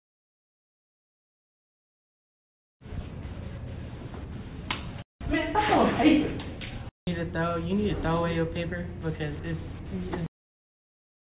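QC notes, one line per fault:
No faults heard.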